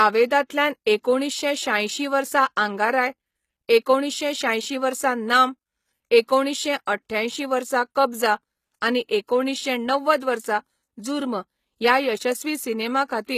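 HE-AAC compression, throughout the speech: the top end stops dead near 14.9 kHz, and the treble above the coded band sounds rebuilt rather than recorded. This is likely spectral band replication at a low rate, around 20 kbps, so sibilants come out gritty, metallic and lispy.

Pre-echo at 10.20 s: a short hiss of about 17 ms arrives just ahead of a sharp onset. The codec spread its quantisation noise across the whole transform block, so noise meant for the loud attack leaks into the quiet moment before it, softening the onset.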